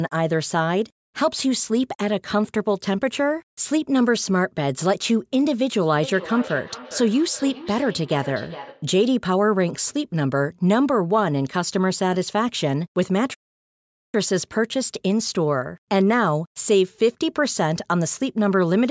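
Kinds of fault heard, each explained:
Feedback echo between two devices: From 5.95 to 8.98 s each syllable returns roughly every 0.4 s, at most about 15 dB below the speech, thinner and ringing. A second device replays this microphone's signal into it. A spectrogram shows faint, evenly spaced copies trailing each burst.
Playback stall: From 13.34 to 14.14 s the speech cuts off mid-flow for 0.8 s, then resumes. This is likely a player starved of data or a blocked audio thread. The waveform drops to a flat line, and the spectrogram shows a blank vertical band.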